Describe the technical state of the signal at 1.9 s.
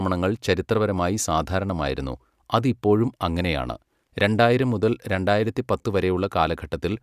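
At 1.9 s the speech signal is intact, with no audible fault at that moment.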